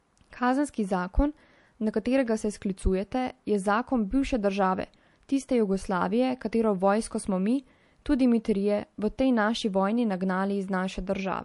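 MP3 compression artefacts run throughout the clip, from start to finish. Nothing reaches above about 11.3 kHz, so the top of the treble is simply gone, and the damage is plainly audible: a watery, swirling quality and chirpy, metallic edges on sibilants. The likely cause is an MP3 encoder starved of bits, consistent with a rate near 48 kbps, which shaves off the high band and lets weak spectral detail flicker in and out between frames.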